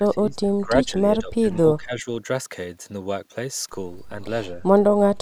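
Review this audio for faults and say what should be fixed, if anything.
Speech suppressed in double talk, from 0.0 to 1.44 s and 1.6 to 2.07 s: the speech ducks by up to about 20 dB, likely because an echo canceller muted it while both sides were talking. To prevent this, use an echo canceller with proper double-talk detection that attenuates only the echo path, not the near-end talker.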